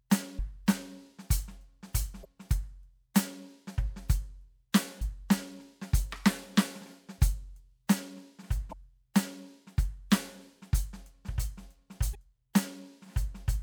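Brief glitches break into the music at 0.36–0.40, 2.21–2.26, 4.98–5.02, 8.69–8.73 and 12.11–12.15 s: damaged data in a compressed stream, where corrupt frames throw the decoder out of sync.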